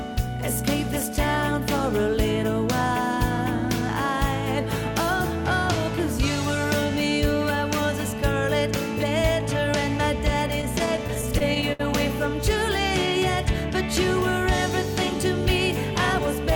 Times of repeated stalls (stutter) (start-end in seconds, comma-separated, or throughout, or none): 10.61-11.81